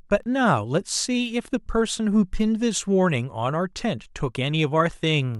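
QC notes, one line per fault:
0.23–5.35 s: periodic USB or driver dropouts. Ticks recur about every 1.02 s through the speech. Each time, a tiny fraction of a millisecond of audio is replaced by silence as the USB bus or audio driver stalls, so the waveform breaks and clicks.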